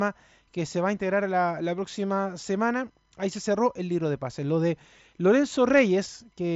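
Speech over a Bluetooth mSBC headset link, its content stopping near 7.7 kHz as expected for that 16 kHz wideband codec, with no faults found.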